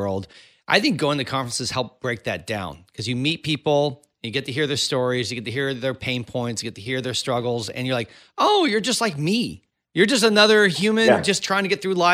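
No audible technical faults.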